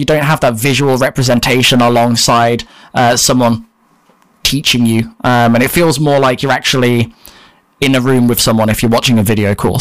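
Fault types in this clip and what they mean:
hard clipping: the speech drove a stage about 13 dB beyond its limit, so peaks were cut flat, giving harsh fuzz across roughly a tenth of the samples throughout.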